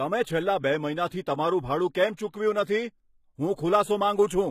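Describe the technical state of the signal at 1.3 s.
At 1.3 s the speech carries plainly audible codec damage that runs through the whole clip: sibilants sound gritty and metallic, and nothing remains above 14.9 kHz. The likely cause is HE-AAC compression, at a rate that fits roughly 20 kbps, where the treble is rebuilt by copying lower bands upward under a coarse envelope. On a spectrogram the upper band looks like a smeared, blocky echo of the region below, ending in a hard ceiling at 14.9 kHz.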